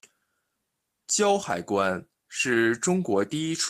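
At 2.53 to 2.55 s there is a lost packet rebuilt from error correction. The stretch lasts about 20 ms, which fits a single lost packet. The audio never drops out, because the next packet carried a low-bitrate backup copy of the missing one. The decoder played that copy in place of the original. The result is a brief patch of speech that sounds rougher and noisier than its surroundings.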